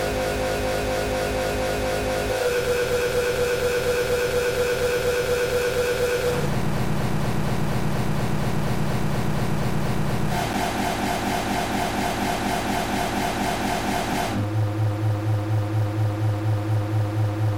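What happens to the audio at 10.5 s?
At 10.53 s there is a block of digital silence: for about 5.3 ms the signal drops straight to silence and then returns, with no fade on either side. That length fits a 256-sample output buffer that wasn't filled in time, or a run of invalid values replaced by zeros. Because the hole is so short, it is heard as a tick or dip rather than a gap.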